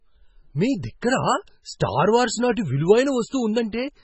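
Throughout the speech, heavy MP3 compression is the likely cause. Short of bits, which fits a bitrate near 16 kbps, the encoder removes everything above 8 kHz and drops weak frequency lines frame by frame, leaving the sound dull, watery and swirly, with smeared attacks.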